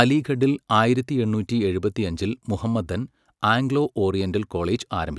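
No technical faults can be heard in this recording.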